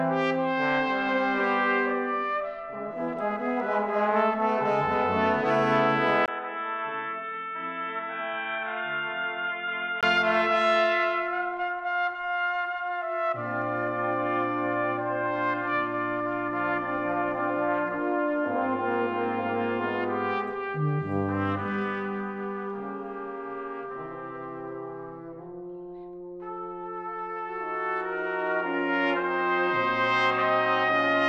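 Input switched to a poorer device, from 6.26 to 10.03 s: after a 20 ms gap the audio turns dull, with nothing above 3.8 kHz, drops about 10 dB and gains a faint new noise floor, likely from a narrower-band microphone taking over.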